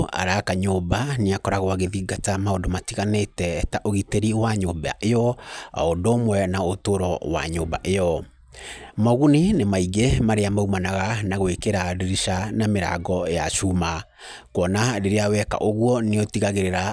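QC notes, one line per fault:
No faults heard anywhere in this recording.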